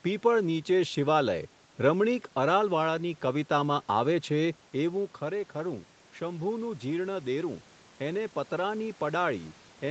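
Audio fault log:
4.87 to 9.90 s, automatic gain rising: the input falls by about 9 dB once the talker moves away, and the gain control then lifts the level slowly. Voice and room noise swell together, whereas a talker coming closer would raise the voice alone.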